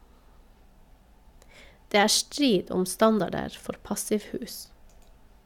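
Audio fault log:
Nothing stood out on listening to this speech recording.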